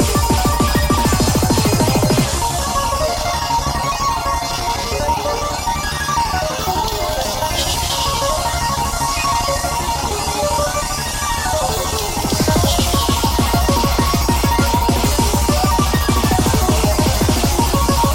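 No technical faults can be heard anywhere in the recording.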